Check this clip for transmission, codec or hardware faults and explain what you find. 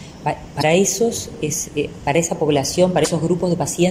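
Two short faults, both damaged data in a compressed stream. From 0.59 to 0.64 s and again from 3.01 to 3.07 s, a brief glitch is heard as corrupted frames are misread and the decoder loses sync and hunts for the next frame header.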